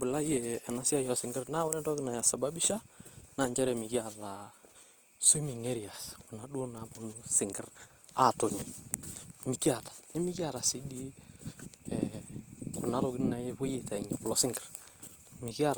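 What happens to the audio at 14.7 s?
At 14.7 s, as throughout, the speech carries likely Opus compression at a low bitrate near 24 kbps: band energy kept but filled with noise, giving a grainy, rough texture.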